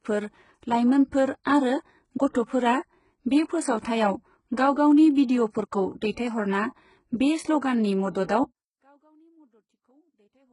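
HE-AAC compression runs through the whole of this speech recording: the treble stops near 11.1 kHz and what sits above the lower band sounds rebuilt rather than original. The heavy damage is likely from spectral band replication at a very low rate, which fits around 12 kbps, with copied harmonics misaligned across the crossover. Pre-echo appears at 6.12 s, 8.12 s and 8.24 s, where a short hiss runs 53 ms, 35 ms and 49 ms ahead of each attack. The transform block spreads its quantisation noise, sized for the loud onset, into the quiet moment just before it, smearing those attacks. Audio dropout to a faint residue begins at 8.44 s and lasts to the end. The signal cuts off abruptly, leaving only a faint sound roughly 40 dB below its normal level, with the path likely staying live after the loss.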